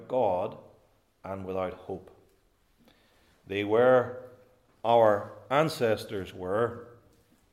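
Nothing in the audio stood out as a technical problem on listening.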